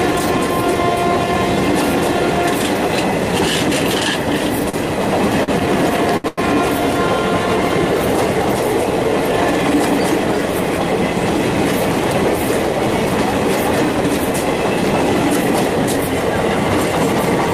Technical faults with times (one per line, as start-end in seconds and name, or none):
4.69-4.75 short stall from a late packet
5.43-6.40 repeated stalls (stutter)